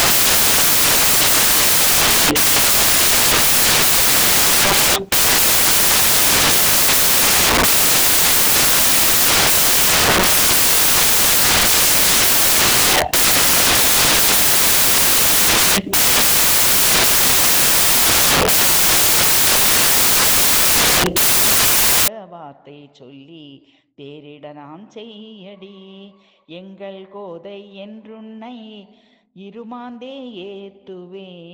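From the start to 22.08 s the audio is buried under loud, harsh broadband noise. That is samples built from the wrong bytes: the reader assembled each sample with its bytes misaligned or in the wrong order, so the rapidly changing low-order bits landed in the most significant position and became the bulk of every value, turning the signal into broadband noise until 22.08 s.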